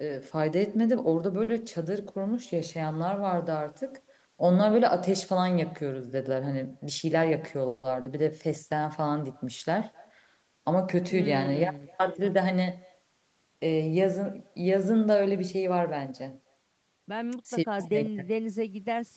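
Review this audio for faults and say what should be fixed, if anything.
Echo with no canceller runs through the whole clip. The far end's loudspeaker feeds its microphone, so the speech returns about 28 dB down, roughly a third of a second late.

Short stall from a late packet at 1.43–1.50 s. A packet arrived late, and the receiver held the last sound for 50 ms until it came, so nothing is lost but the sound drags.

Jitter buffer speed-up at 6.90–7.33 s (111%), 12.03–12.79 s (108%) and 15.15–16.13 s (110%). The receiver trimmed pitch periods to shed excess buffered delay, so the speech hurries at unchanged pitch.

Call audio freeze at 7.68–7.86 s. The buffer ran dry, likely from packets held up in transit, and 160 ms of continued, fading sound was inserted before playback resumed.

Short concealed packet loss at 8.02–8.08 s. About 40 ms never reached the decoder and was filled by extrapolating the preceding sound, leaving a brief smear in the Opus-coded, 8 kHz-limited audio.

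Enabling acoustic echo cancellation at the far end and stabilising the network path to reduce delay spikes and loss would prevent these faults.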